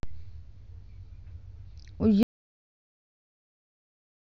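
A short speech clip that suffers an audio dropout to silence at 2.23 s: the speech cuts off mid-flow and everything from there to the end is dead silence, with no room tone at all. That's most likely the input being lost while the recorder kept writing silence.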